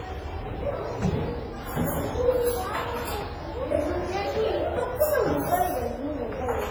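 From start to finish the sound rings and smears, with a hiss that swells and fades alongside it, likely WMA compression squeezed hard, something around 24 kbps.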